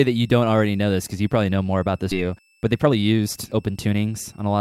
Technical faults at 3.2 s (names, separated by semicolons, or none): switching supply whistle; jitter buffer speed-up